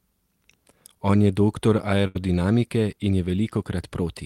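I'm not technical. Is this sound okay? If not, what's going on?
No, there's one glitch. Right after "je doktor", at about 2.07 to 2.17 s, you get a burst of packet loss: a small run of the audio never arrived in time. The playback filled the hole by stretching the last sound it had for about 74 ms, fading it out, so you hear a brief held buzz or hiss. Then it jumps ahead, and about 80 ms of the speech is simply gone.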